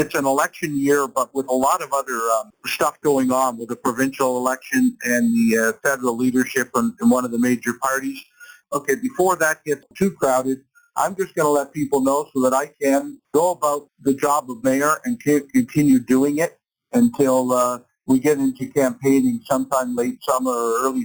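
Imaging from sample-and-hold upsampling runs throughout: the audio was raised from 8 kHz to 44.1 kHz by holding each sample with no smoothing filter. Mirrored spectrum copies result, the lowest spanning 4 kHz to 8 kHz at about 17 dB below the signal, heard as a bright metallic fizz tracking the sound's level and moving against its pitch.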